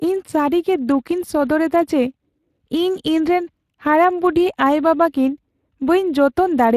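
Speex codec damage runs through the whole speech clip, from start to end. Speex is a CELP coder: it models the voice with a short-term filter and spends its bits on the excitation that drives it. The damage here is plainly audible, which points to a middle-rate setting somewhere around 22 kbps, where that excitation is coded coarsely. The voice takes on a noisy, hoarse grain, and nothing survives above 15.3 kHz.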